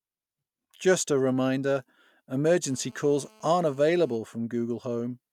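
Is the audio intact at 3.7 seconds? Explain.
No. GSM phone buzz runs from 2.63 to 4.16 s: a nearby 2G phone on a call transmits bursts about 217 times a second, and the audio circuitry rectifies them into a steady, raspy 217 Hz buzz with many harmonics, about 32 dB below the speech.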